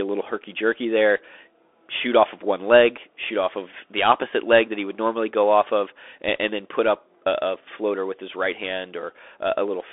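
From start to finish the speech carries the sound of a Bluetooth CVSD headset codec. The band is narrow. Almost nothing sits below 300 Hz or above 3.5 kHz, and nothing at all passes above 3.8 kHz. The codec sends a single up-or-down bit per sample, which fits a 64 kbps link. Its adaptive step cannot keep up with loud high sounds, so they distort. S sounds turn scratchy. A granular hiss runs underneath. The damage is plainly audible.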